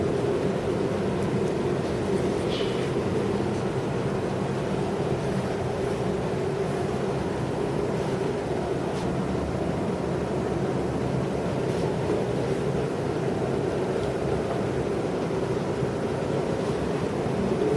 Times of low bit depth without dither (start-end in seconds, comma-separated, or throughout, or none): none